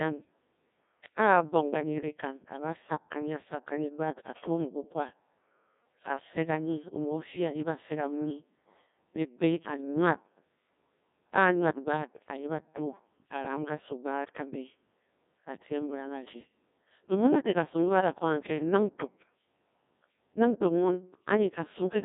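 Throughout, the speech carries the robotic, buzzy sound of the Codec 2 vocoder, consistent with a rate near 1.6 kbit/s. Only pitch, voicing and a spectral envelope survive, rebuilt from sine waves within roughly 150 Hz to 3.7 kHz, with nothing above 3.8 kHz. Unlike a waveform codec's smearing, the damage is heavy and synthetic.

At 18.60 to 18.62 s, just after "ba da ko ganke", a 20 ms gap between chunks opens as a hard-edged silent hole, fitting 10-second chunks joined late. Unlike a dropout, no audio is lost; the sound simply pauses and resumes.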